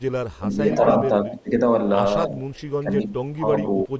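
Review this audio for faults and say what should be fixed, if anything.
Echo leak at 0.31–0.38 s and 2.54–2.63 s: a faint copy of the speech returns 300 ms late, about 35 dB down. It is likely far-end echo that the canceller missed, and it shows as a weak, delayed repeat of earlier harmonics on a spectrogram.

Speech suppressed in double talk at 0.40–0.59 s, 0.98–1.51 s, 2.27–2.39 s, 2.83–3.45 s and 3.88 s to the end: the level dips, by around 10 dB in most places, only slightly near 2.3 s and by about 20 dB at the close. The waveform envelope visibly sags in these spans.

Preventing both means retuning the echo canceller with better double-talk detection and a more accurate delay estimate, or using a headset so that little loudspeaker sound reaches the microphone.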